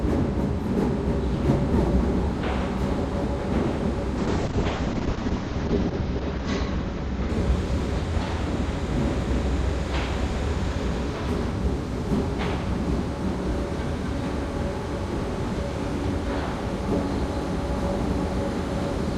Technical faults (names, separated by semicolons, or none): call bitrate drop